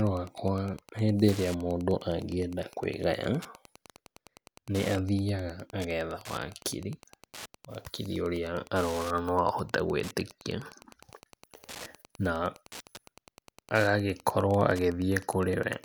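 From start to finish, a steady tick runs under the speech at about ten per second, a spacing of 102.4 ms. That's Wi-Fi interference: a nearby radio's beacon gets rectified by the audio circuit, leaving a faint buzzy ticking roughly 20 dB under the speech.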